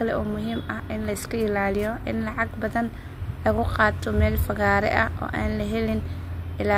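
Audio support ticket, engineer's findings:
No audible defects found in the signal path for this speech recording; levels, continuity and timing show nothing requiring further action.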